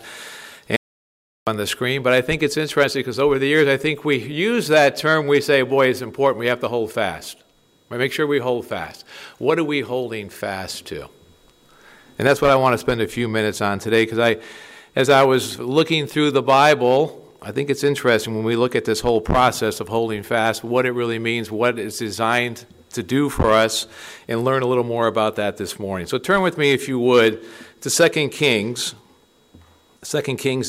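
At 0.76 s the sound cuts to silence until 1.47 s. This audio dropout to silence, about 0.71 s long, likely came from a lost input.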